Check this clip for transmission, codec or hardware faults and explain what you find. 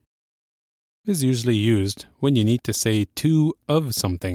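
Checking this clip finds no faults.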